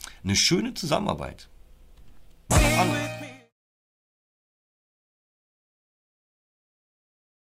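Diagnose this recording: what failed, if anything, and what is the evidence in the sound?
Nothing failed; the fade-out by 3.5 s is intentional.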